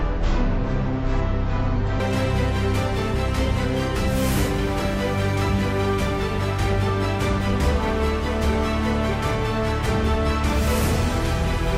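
From 0.0 to 2.0 s it's stereo read as mono: interleaved left and right samples run as one channel, so the sound crawls at 0.5x speed, a full octave low.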